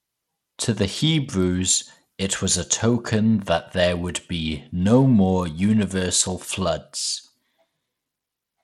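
A speech clip with gritty, flickering treble and nothing above 16.1 kHz throughout, likely Bluetooth SBC compression at a starved bit pool, around 96 kbps.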